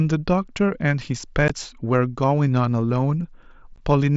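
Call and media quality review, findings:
Unconcealed Bluetooth headset packet loss. Two abrupt speech dropouts, at 1.48 s and 3.76 s. Each is a 15 ms hole with hard edges. The length fits two lost headset frames, replaced by silence or an idle pattern, with no concealment. Link carries speech through the mSBC headset codec, band-limited to 8 kHz.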